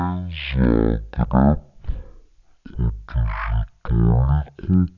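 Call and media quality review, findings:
Wrong sample rate, throughout. Speech is drawn out to about a third of normal speed and pitch sits 19 semitones low, both shifted together. The playback path is clocking samples out unconverted, most consistent with 48 kHz material being played at 16 kHz. The resampler or rate negotiation on the playback side is the probable component.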